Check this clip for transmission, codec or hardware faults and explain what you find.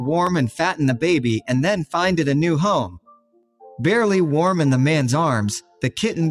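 Three faults are present: a speech-oriented noise suppressor processing non-speech material throughout, regular slip clicks that point to clock drift, and two passages where that suppressor cuts the sound hard.

Noise suppressor applied to music or sounds, across the whole clip. A suppressor tuned for voice treats sustained tones, ambience and reverberant tails as background noise and pulls them down, while sharp onsets mostly escape. Its gain here swings by about 10 dB, so the sound pumps and flutters: attacks mostly come through, then what is held behind them sags and thins.

Clock drift buffer slips, from 0.27 s to 5.01 s. A click or pop recurs every 1.58 s while sound is present. The likely cause is two devices running on independent clocks that disagree by something like 200 parts per million. The buffer between them slowly fills or drains until a small block of samples is dropped or repeated. 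Each correction leaves a tiny discontinuity in the waveform, heard as that regular tick.

Sound cut by the noise suppressor, from 2.87 s to 3.63 s and from 5.61 s to 5.83 s. In these stretches the suppressor decided the material was noise and attenuated it beyond its usual swing. The drop reaches about 21 dB in the first passage, which lasts roughly 0.7 s, and about 13 dB in the shorter second one. Sustained and decaying parts sink or have their tails chopped off, while abrupt transients still get through.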